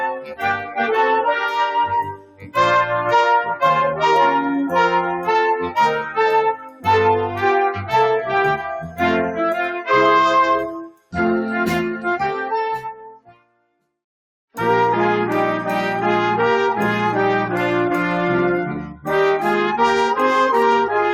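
A noise suppressor applied to music or sounds runs from the start of the clip to the end. A processor built to clean up speech treats steady, sustained material as noise and keeps pulling the level down, so the gain swings by about 10 dB as it decides what to keep. The sound audibly breathes and thins, rising and sinking with the suppressor's changing judgement rather than with the material itself.

Sound cut by the noise suppressor then shows up as distinct dips, where the suppressor attenuates a passage well below its surroundings: 0.06 to 0.79 s (down about 15 dB), 1.45 to 1.76 s (about 7 dB), 2.02 to 2.56 s (about 18 dB), 6.54 to 6.87 s (about 17 dB), 8.82 to 9.0 s (about 10 dB), 10.67 to 11.14 s (about 18 dB) and 12.93 to 13.78 s (about 18 dB). Each sinks or is cut short, sounding hollowed out before the level returns.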